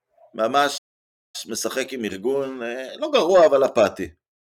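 At 0.77 s the speech halts for 0.56 s. This is a playback stall. The player likely ran short of data, then resumed at 1.36 s.

Time-compressed catch-up follows from 1.36 to 4.36 s. Small slices are cut and cross-faded to clear the backlog. Speech runs 1.15 times fast, at normal pitch.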